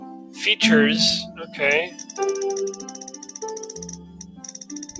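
Throughout the clip a noise suppressor built for speech works on material it was not designed for, treating steady and sustained parts of the sound as noise. Its gain keeps moving by roughly 15 dB, so the level pumps and thins instead of holding steady. This differs from a plain gate or a dropout because onsets still mostly come through. It is the sustained body and the tails that sag.

Within that, five stretches show sound cut by the noise suppressor. From 0.0 to 0.37 s the level sinks by up to about 10 dB. It drops again from 1.29 to 1.56 s by about 8 dB, from 1.89 to 2.12 s by about 9 dB, and from 2.78 to 3.34 s by about 9 dB. The last stretch, from 3.96 to 4.66 s, drops by about 8 dB and is the longest at roughly 0.7 s. In each case held or decaying sound is pulled down or its fade is shortened, while sharp attacks mostly survive.

The call path band-limits everything above 8 kHz, which fits a G.722 codec at 64 kbps. 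That ceiling stays fixed for the whole clip, whereas the suppressor's cuts come and go over time.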